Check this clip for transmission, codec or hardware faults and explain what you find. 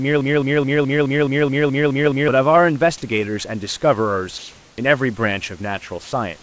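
Three transmission faults are present in this speech clip, which has passed through a call path whose audio stops at 8 kHz, consistent with G.722.

From the start to 2.28 s there is a broken-record loop, already under way when the clip begins. A 212 ms fragment repeats back to back, about ten times, with an identical stutter each pass. The likely cause is a stalled player or stream resending its last buffered fragment, so the intended audio for that span is lost.

From 4.38 to 4.78 s there is comfort noise in place of the background. For 400 ms, the room noise, about 31 dB below the loud speech, becomes a smooth, featureless hiss roughly 3 dB different in level. This likely comes from discontinuous transmission, with the receiver synthesising noise during a pause.

From 6.04 to 6.12 s, sound is dropped by the voice detector. An 80 ms stretch of steady synthetic noise replaces about 70 ms of sound. 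The likely cause is the sender's detector mistaking that sound for background and pausing transmission.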